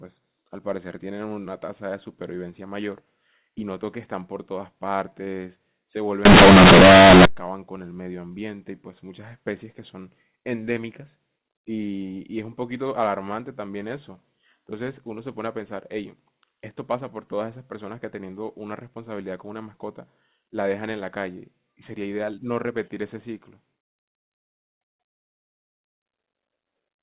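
From 6.25 to 7.25 s the speech turns into a harsh, very loud buzz: companded audio read as linear. The mu-law bytes of the telephone stream are played as plain 8-bit samples with no expansion, so every sign change throws the output across half its range and quiet passages come out as loud as peaks. Unlike clipping, which flattens only the loudest moments, this distortion fills the pauses with heavy noise too. Outside that second, the narrow telephone band of G.711 sounds as it should.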